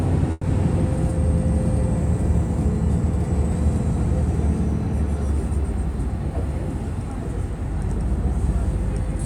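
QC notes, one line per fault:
0.31–0.46 s, burst of packet loss: consecutive packets never arrived, so the receiver stretched and faded the last sound for about 120 ms, then resumed past a 120 ms gap.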